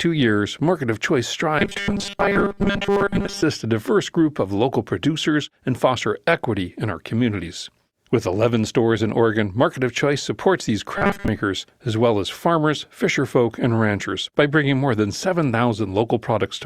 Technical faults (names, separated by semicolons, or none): robotic sound from repeated short buffers